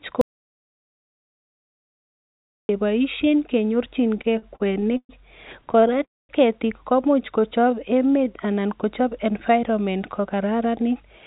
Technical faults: audio dropout to silence; repeated stalls (stutter); call audio freeze; jitter buffer slow-down; jitter buffer speed-up

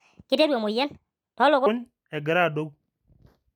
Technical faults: section at the wrong speed

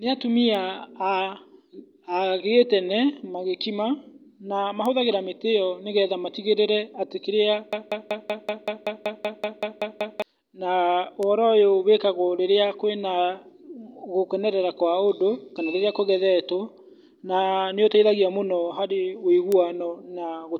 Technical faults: bit error spike; broken-record loop

